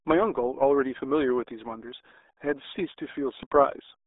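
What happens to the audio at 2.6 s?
At 2.6 s the speech is muffled and gargly from the RealAudio 14.4 codec, present throughout the clip. Squeezed to 8 kbit/s, it passes nothing above 3.8 kHz. Unlike a plain telephone band limit, it adds heavy burbling coding damage, not just missing highs.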